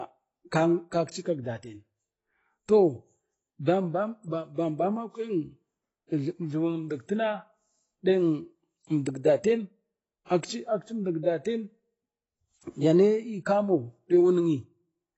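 AAC compression damage runs throughout the speech: nothing is present above about 7.9 kHz, leaving it dull, with audible smearing and a warbling, fizzy edge on sibilants. Narrowing the band to save bits likely points to AAC-LC at roughly 24 kbps.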